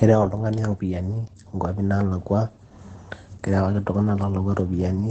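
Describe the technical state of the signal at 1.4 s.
At 1.4 s you're hearing Opus voice compression, the same as across the whole clip. The codec is running its SILK linear-prediction mode, which models speech as a filter driven by a coarsely coded excitation, and there's nothing above about 9 kHz. The damage is plainly audible: the speech sounds muffled and a bit hoarse, with a slightly robotic edge, which fits a low bitrate of around 12 kbps.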